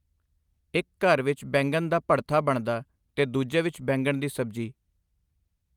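Nothing goes wrong anywhere in this bit of speech; it just runs along from the first moment to the last without a single hiccup to point at.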